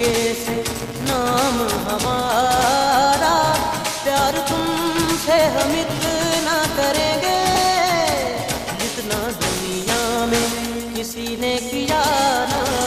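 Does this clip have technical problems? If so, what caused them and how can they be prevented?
Yes. A filter restarted on every block runs through the whole clip. The filter loses its memory at each block boundary and starts again from silence. Each restart leaves a tiny transient. These repeat at about 172 Hz, which fits a 256-sample block at a 44.1 kHz rate. The result is a steady buzz that rises and falls with the level of the sound. To prevent it, carry the filter's state from one block to the next instead of resetting it.

Lost LE Audio frames cause two brief dropouts, at 2.02 s and at 7.55 s. Each gap lasts about 7.5 ms, which points to a single lost LC3 frame. The decoder covers the gap by repeating the last spectrum with randomised signs. Tonal content turns into a short, noisy smear at each point. Both gaps are too short for the fade toward silence to become audible. To prevent this, improve the Bluetooth link with a shorter range, less interference or more retransmission margin.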